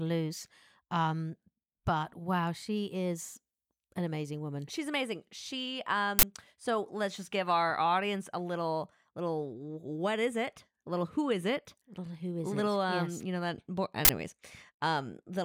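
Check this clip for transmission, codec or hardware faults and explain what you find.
Two faults of the same kind turn up in this speech. Uninitialised buffer at 6.19 to 6.23 s, just before "so let's just give", and at 14.05 to 14.09 s, just after "you know that board": each time a 40 ms block was sent to playback before any audio had been written into it, so whatever stale memory it held was read out as samples, heard as a short, loud burst of digital noise.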